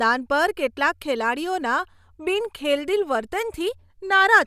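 No faults are audible anywhere in the speech.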